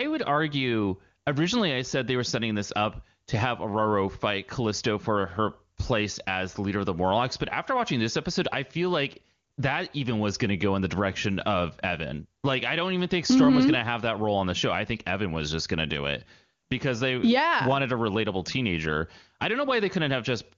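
Nothing is technically wrong with this speech clip, which comes through the AMR wideband (HD Voice) codec at a high-rate setting.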